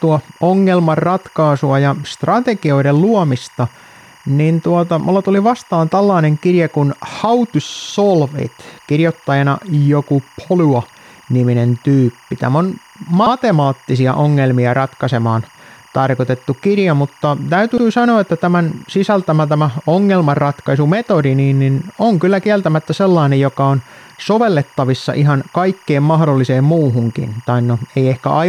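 A faint chirping warble runs under the speech for the whole clip, flickering between pitches near 1 and 2 kHz at around 30 dB below the voice. This is timecode bleed: 24-frame-per-second linear timecode leaking from a neighbouring track or cable into the audio path.

At 7.70 s a 64 ms fragment stutters, playing three extra times and stretching the audio by 192 ms. Single 64 ms repeats follow at 13.26 s and at 17.78 s, between "tarkoitettu kirja mutta" and "sanoa että tämän sisältämä". These are repeated frames, a short run of compressed frames sent more than once and decoded again.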